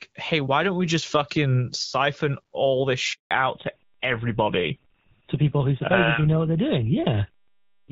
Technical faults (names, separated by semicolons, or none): handover gap; fallback to narrowband